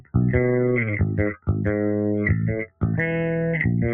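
A noise suppressor applied to music or sounds runs through the whole clip. A speech-oriented suppressor keeps treating steady and sustained parts of the sound as noise, so its gain swings by roughly 5 dB. Held material pumps and thins while sharper onsets pass more intact.

Sound cut by the noise suppressor occurs at 0.0 to 0.15 s, 1.33 to 1.54 s and 2.65 to 2.83 s. The suppressor judged these stretches to be noise and pulled them down by about 15 dB, about 13 dB and about 15 dB. The sound briefly sinks.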